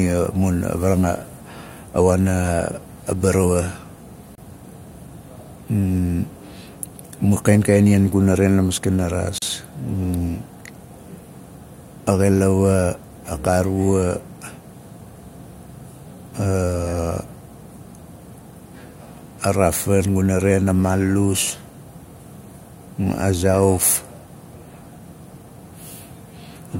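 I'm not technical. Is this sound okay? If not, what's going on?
No. At 4.35 s and 9.38 s there's a gap at a join of encoded pieces: separately encoded chunks were glued together with padding left in, so the speech blinks out briefly.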